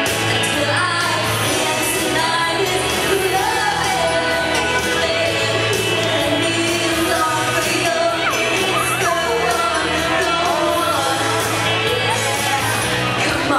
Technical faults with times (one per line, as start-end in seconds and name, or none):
none